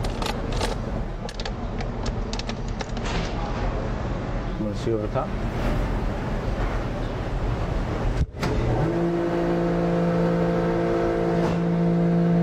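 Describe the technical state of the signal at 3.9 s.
At 3.9 s the signal is in a digital radio blend to analogue, lasting from 0.96 to 4.83 s. The receiver lost its digital stream and cross-faded over 0.45 s to the FM broadcast. The level drops about 2 dB, and faint hiss sits roughly 40 dB below.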